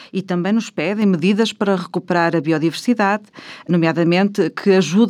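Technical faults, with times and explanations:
1.02 s, microphone volume stepped up: speech and background noise jump together by about 4 dB in one abrupt step, with no fade. Automatic gain control in the call software judged the microphone too quiet and raised the device's input volume at once, so everything the microphone picks up gets louder at the same instant. On a waveform the envelope widens suddenly at 1.02 s. On a spectrogram all bands, including the noise floor between syllables, brighten along one vertical line.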